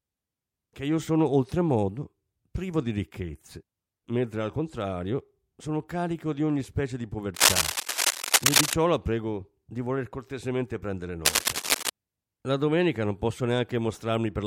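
From 7.35 to 8.73 s, after "di ogni specie di", cable scratch noise rustles louder than the speech. A worn connector being moved is the likely cause. It returns at 11.25 to 11.89 s, after "di voler cortesemente prendere", about as loud as the speech.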